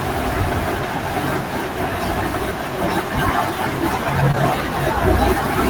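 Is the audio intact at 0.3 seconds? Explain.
Yes, the audio is intact at 0.3 seconds, with no audible fault at that moment.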